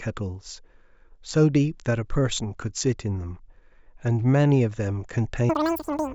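From 5.49 s to the end of the clip at about 6 s, the speech jumps suddenly to a chipmunk-like squeak, racing along at about 2.76 times normal speed and roughly 17.6 semitones higher. This is a wrong sample rate fault. Audio captured at a 16 kHz rate is being played back at 44.1 kHz with no conversion, so every sample goes by too quickly, and pitch and tempo rise together by the same ratio.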